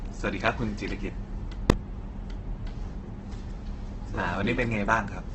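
Throughout the clip the speech carries the grainy, rough texture of heavy Opus compression, likely from encoding at a very low rate, something around 12 kbps, with the music-style CELT mode in use. With too few bits to code every band properly, the encoder keeps each band's overall energy but fills the detail with folded copies of lower bands or with noise. Voiced tones come out coarse and hissy rather than swirly, and the speech loses its smooth, clean edges.

At 1.70 s a calculation produced infinite or invalid numbers, and the output was forced to its largest value. For a block of about 1.3 ms, which fits a 64-sample processing block, the signal sits flat at one extreme value, far beyond the speech's peaks, instead of carrying the speech. Because the block is so short, the pop at its start and the one at its end merge into a single, sharp, very loud bang.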